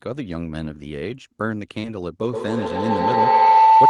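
A brief smear in the speech at 1.79 to 1.85 s is short concealed packet loss. About 40 ms of audio never reached the decoder in time, and the receiver covered roughly 38 ms of that gap by extending the preceding sound before easing back into the real signal. That leaves a momentary wobble where the speech should continue cleanly. From 2.22 s to the end of the clip, a feedback howl takes over. It is a narrow, ringing tone around 1 kHz with repeats roughly every tenth of a second, and it peaks at about 11 dB above the speech. Two devices in the same room were on the call, so sound from the loudspeaker reached the microphone again and gained level on each pass. The loop's delay set the repeat interval, and the frequencies the loop favoured produced the pitch. Nothing breaks the loop before the clip ends, so the howl runs to the last moment.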